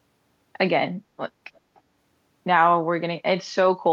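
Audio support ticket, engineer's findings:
Echo leak, 1.75 to 1.81 s: short, very faint delayed copy of the speech trailing by 295 ms. Likely one end on loudspeaker, its echo canceller missing part of the mic pickup and sending that residue back down the line.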